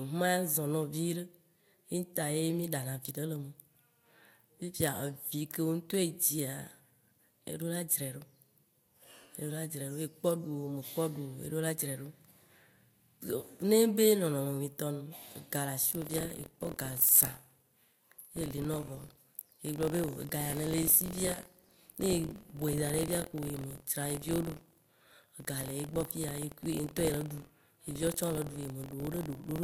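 Buffer tearing from 15.81 s onward: writer and reader cross every period, splicing in older audio, giving a robotic 43.1 Hz buzz that fits a 1024-sample buffer.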